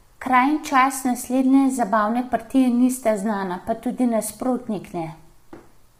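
Low-delay AAC compression runs through the whole speech clip: the voice sounds rough and grainy, with noise filling the gaps between harmonics and a dull, synthetic-sounding top band. This is likely AAC-ELD, whose short frames resolve pitch poorly, and the heavy damage points to a low bitrate around 24 kbps.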